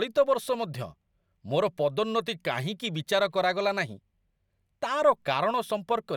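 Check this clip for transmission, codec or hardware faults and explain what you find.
No faults detected.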